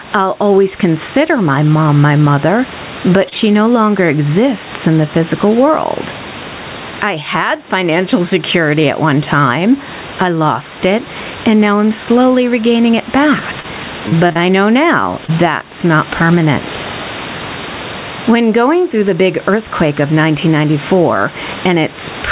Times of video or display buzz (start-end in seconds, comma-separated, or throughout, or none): none